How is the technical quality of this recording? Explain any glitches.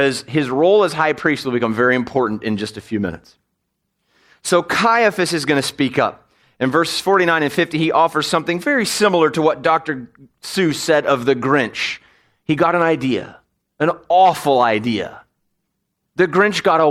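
The technical quality of this recording is sound, with no glitches to explain.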